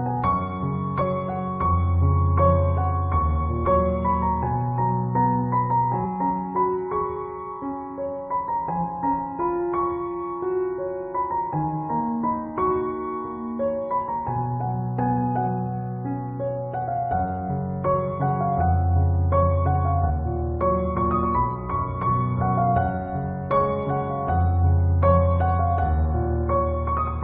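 The audio has compressed frames skipped at 1.0 s, 3.65 s, 6.04 s and 20.09 s. Each time, whole frames of the compressed stream never reach the output. They were either missing or rejected by the decoder as damaged. The sound jumps forward by about a tenth of a second at most points, and about a fifth at 3.65 s. That fits a handful of 23.2 ms frames.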